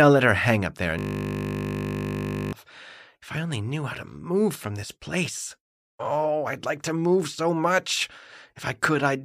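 From 0.99 s to 2.53 s the audio collapses into a steady, flat buzz pitched at 50 Hz, with no movement or decay, before the sound resumes abruptly. This is a system hang loop: the computer or its driver stalled while the sound hardware kept replaying the same 20 ms stretch of its ring buffer, some seventy-odd times in a row. A loop that short repeats too quickly to be heard as a stutter, so it fuses into a tone at the loop rate.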